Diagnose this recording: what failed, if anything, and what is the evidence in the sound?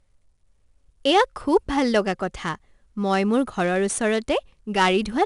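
The codec stage failed: 4-bit ADPCM compression throughout the speech. A gritty hiss rises and falls with loudness, attacks distort, and nothing above 10.6 kHz suggests an ADPCM stream of about 89 kbps. Unlike fixed low-bit-depth noise, this grit vanishes in pauses.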